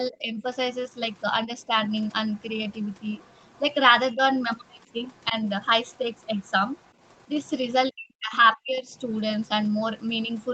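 Speech recorded on a call shows two recurring faults. The first is speech suppressed in double talk. The talker's level dips at 0.11–0.44 s, 1.46–1.72 s, 4.15–4.21 s, 5.29–5.35 s and 7.92–8.94 s. The short dips are shallow, roughly 5 to 15 dB. The last one runs well over half a second and drops by about 40 dB, close to a cutout. The likely cause is an echo canceller that cannot tell the near talker from loudspeaker echo while both sides speak, so it turns everything down. The second fault is the other side's voice leaking through, a faint second voice at roughly 35 dB below the talker, heard at 0.73–3.6 s, 4.67–7.72 s and 9.1 s to the end. It is likely residual loudspeaker echo that the canceller left in the microphone signal. Across the clip the audio tops out at 8 kHz, which fits a narrowed Opus call path at around 32 kbps.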